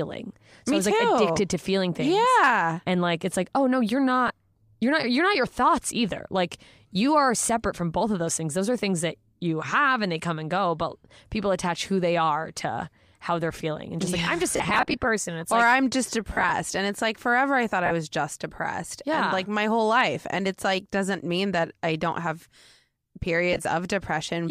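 Brief grainy smears break into the speech where the last sound is held as a noisy wash instead of cutting to silence. This happens at 4.28 to 4.30 s after "like oh no you're", scattered across 14.52 to 14.94 s, at 16.33 to 16.51 s after "or like I'm just", at 17.86 to 17.92 s before "was just depressed", and at 23.53 to 23.65 s. These are lost LE Audio frames, in gaps of 20 to about 50 ms that fit 10 ms frames. The decoder fills each gap by repeating the last spectrum with scrambled phase, which likely comes from LC3 packet-loss concealment.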